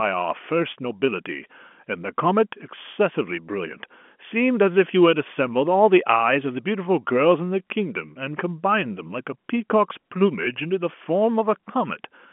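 Telephone-line speech over G.711; no faults are heard.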